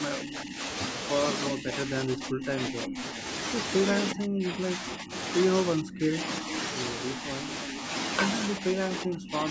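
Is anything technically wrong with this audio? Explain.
Yes. The speech is repeatedly turned down in speech suppressed in double talk, at 0.21–0.59 s, 1.52–3.24 s, 4.13–5.13 s, 5.76–6.52 s and 8.6 s to the end. The level drops by about 10 dB in the first stretch, about 15 dB in the second, and as much as 25 dB in the last three, so the talker thins or breaks into pieces. These dips are most likely caused by an echo canceller that could not tell this talker from loudspeaker echo while the far side spoke, so it attenuated everything. Unlike a network dropout, the sound dips and recovers in uneven fragments rather than going cleanly silent.

An echo leak sits inside the second stretch, from 2.28 to 3.02 s. A delayed copy of the speech trails the original by 362 ms, roughly 10 dB below it. The likely cause is the far end's loudspeaker feeding its microphone past an incompletely adapted echo canceller, which sends residual speech back. 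What separates it from room reverberation is that it arrives as a distinct, late repeat rather than a smooth decay.

The call microphone processing shows as a band limit, with nothing above 8 kHz, which fits a 16 kHz sample rate.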